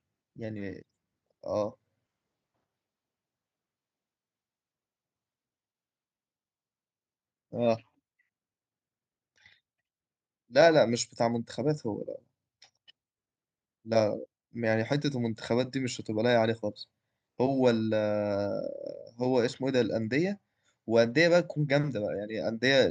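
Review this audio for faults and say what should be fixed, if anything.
Nothing needs fixing, as no faults can be heard in the audio.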